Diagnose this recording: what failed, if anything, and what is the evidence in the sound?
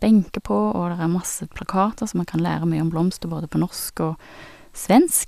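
No stage of the chain shows a failure in this recording. Nothing in the speech gives audible evidence of a defect that would need tracing.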